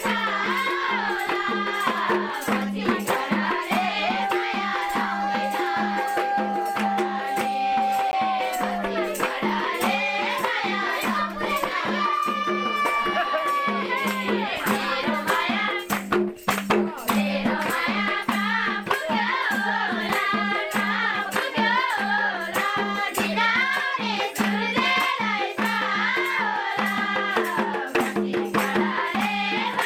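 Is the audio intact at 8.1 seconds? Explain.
No, there's a gap between stream segments at 8.11 s: two 6-second segments don't line up, so the player drops in about 16.5 ms of hard-edged silence, though nothing's actually lost.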